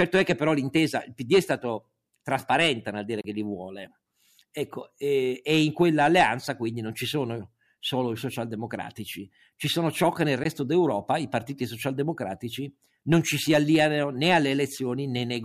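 Audio packets likely arrived too late at the headphones and were discarded, a Bluetooth dropout. The speech cuts to silence for 29 ms from 3.21 s, after "trasparente nel dire", and for 14.5 ms at 10.44 s, after "sono ciò che nel". Each time it resumes further along, as if it had played on.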